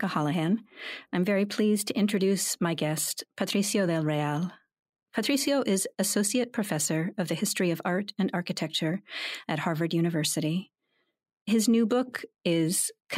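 No technical faults can be heard anywhere in the recording, with the speech signal staying continuous and steady throughout.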